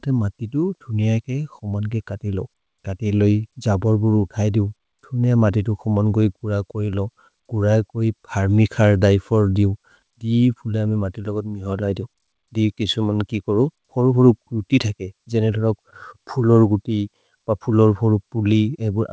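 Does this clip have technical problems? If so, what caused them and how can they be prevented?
No, this clip has no technical problems, and it sounds as expected for audio sent over a WebRTC call path with nothing above 8 kHz.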